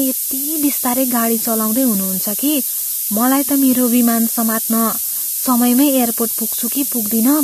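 Low bit depth with noise shaping runs throughout this speech: only 3 bits, with rounding error pushed upward into a steady hiss rising toward the top, about 5 dB above the speech.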